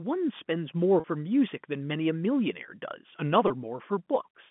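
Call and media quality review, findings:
Packet loss with pitch repetition at 1.00–1.04 s and 3.48–3.50 s. Brief held, buzzy tone, about 40 ms then 20 ms, consistent with two lost 20 ms packets, then one. Jitter buffer or concealment stage loops the last pitch period. Waveform: identical repeating cycles, decaying. Spectrogram: flat, frozen harmonic stripes. Line band 150 Hz–3.4 kHz via G.711 mu-law.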